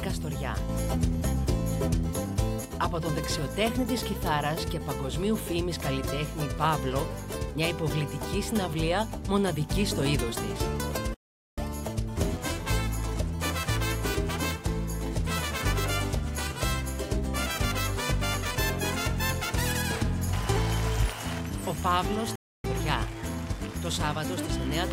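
At 11.14 s the sound stops in mid-flow and stays silent until 11.58 s, a gap of about 0.43 s, and at 22.36 s it drops out again until 22.64 s, about 0.28 s. These are playback stalls, likely from the player running out of buffered data before resuming. On a waveform each appears as an abrupt flat line between intact audio, and on a spectrogram as a clean vertical band of empty columns.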